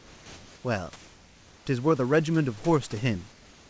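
From 0 to 0.64 s and from 3.32 s to the end, the sender likely stopped transmitting during silence, so comfort noise in place of the background fills both pauses: the real room noise, about 30 dB down, becomes steady, featureless hiss about 1 dB and 2 dB quieter.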